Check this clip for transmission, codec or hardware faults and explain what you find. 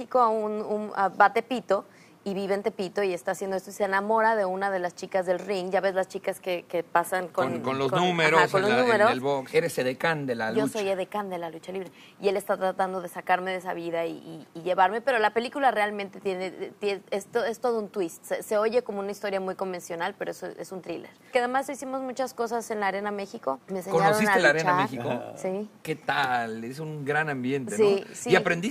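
No transmission, codec or hardware faults can be heard anywhere in the signal.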